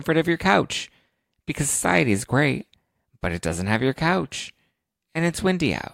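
No technical faults can be heard in this recording.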